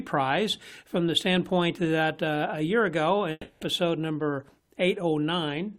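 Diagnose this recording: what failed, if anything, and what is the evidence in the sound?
Long network dropout, 3.31 to 3.64 s. For about 0.3 s the preceding sound is stretched into a fading continuation, then 20 ms of silence, and playback resumes with 0.3 s of audio gone. Packets likely stopped arriving, and the receiver's concealment bridged the gap.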